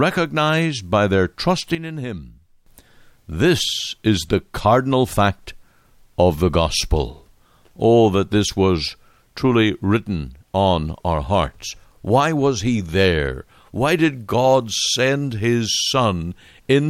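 At 1.75 s the speech and its background noise drop together by about 12 dB in an instant, then stay quieter until 2.66 s, when both snap back. This sudden gain jump likely comes from a digital gain change applied with no ramp.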